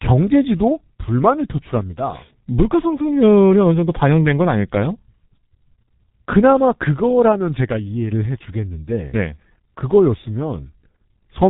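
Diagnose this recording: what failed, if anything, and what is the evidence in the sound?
Muffled, hoarse speech runs from start to finish, with consonants smeared into one another and a dull, boxy tone. Nothing reaches above 3.8 kHz, so sibilants and crisp onsets are gone. The failure is at the codec stage: heavy G.723.1 codec damage. The speech was squeezed through 30 ms frames at a very low rate, which fits about 6 kbit/s. A voice model that updates that slowly cannot follow fast articulation, producing the rough, blurred result.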